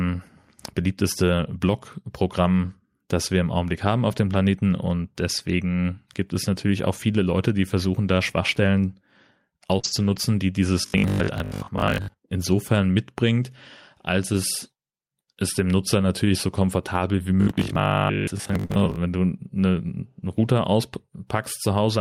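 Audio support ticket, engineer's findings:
Short concealed packet loss, 9.79 to 9.85 s and 18.65 to 18.72 s. Brief smear or wobble about 40 ms long where the sound carries on unnaturally, then blends back. Component: receiver jitter buffer and decoder concealment. Mechanism: about 40 ms of packets arrived too late for playout. The decoder extended the preceding sound to cover the hole, following its pitch for voiced parts and shaping noise for unvoiced parts, then faded back into real audio.

Lost packet rebuilt from error correction, 9.83 to 10.17 s and 18.70 to 18.88 s (ends just before "wenn du eine"). No gap, but the audio turns grainy and noisier, for about 180 ms and 100 ms. Lengths fit nine and five lost 20 ms frames. Component: Opus decoder, in-band FEC. Mechanism: each following packet carried a low-bitrate copy of the lost one, and the decoder played that copy, estimating the missing highs.

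Robotic sound from repeated short buffers, 10.82 to 12.16 s (just before "insofern mitbringt als es") and 17.42 to 18.98 s (between "natürlich so komfortabel wie" and "wenn du eine"). Rigid metallic buzz locked at 50 Hz that loosely tracks the speech. Most of each stretch is repeated audio. Likely cause: capture or playout audio starved of new data, so the software looped the last 20 ms buffer and skipped the real audio, imposing a 50 Hz pitch.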